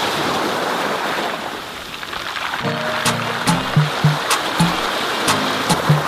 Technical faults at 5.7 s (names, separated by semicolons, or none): damaged data in a compressed stream